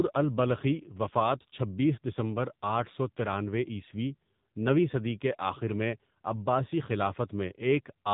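Throughout, the speech carries AMR narrowband mobile codec damage: nothing above 4 kHz, and a buzzy, synthetic edge that fits a low AMR-NB mode around 7.4 kbps.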